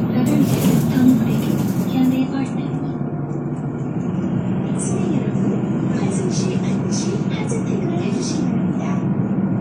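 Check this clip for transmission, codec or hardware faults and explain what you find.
One fault stands out. From 2.19 s to the end, the treble vanishes above 9.7 kHz and the sound turns swirly and coarse without any gap: an adaptive stream at a lower bitrate, which fits a sudden switch from about 96 down to 32 kbit/s.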